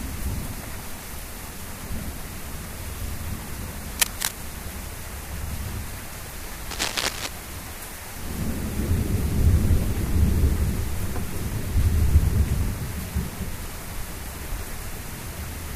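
A recording of everyday sound with two kinds of fault. Bursts of cable scratch noise, rough rustling about as loud as the sound itself, run from 3.99 to 4.32 s and from 6.70 to 7.28 s. A worn cable or connector being moved is the likely cause. At 12.66 s, a 52.2 ms stretch plays twice, a stutter from repeated frames that fits two compressed frames sent again. It adds 52.2 ms to the audio.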